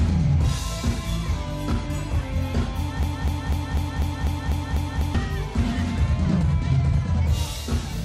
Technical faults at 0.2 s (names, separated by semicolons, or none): none